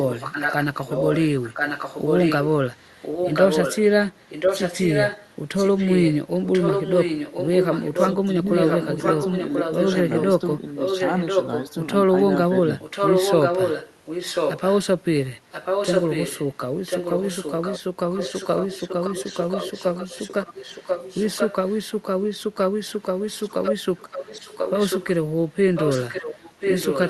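An echo leak runs through almost the whole recording, from 0.0 to 11.75 s, 12.79 to 14.77 s, 15.51 to 21.77 s, 22.65 to 25.07 s and 25.75 to 27.1 s. A second copy of the speech trails the original by 1.04 s, a few decibels quieter and about equally loud between 12.79 and 14.77 s. The likely cause is a loudspeaker's output reaching the far-end microphone past an incomplete echo canceller. Unlike room reverberation, which smears into a tail, this is a distinct, fixed-delay repeat.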